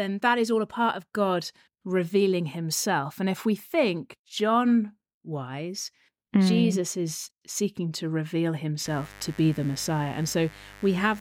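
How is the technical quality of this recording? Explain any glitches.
The speech is marred by one fault near the end. From 8.85 s to the close at 11.21 s, a mains buzz appears. Switching spikes twice in every 50 Hz mains cycle inject harmonics up to several kHz. It sounds like a steady, raspy buzz, roughly 20 dB below the speech.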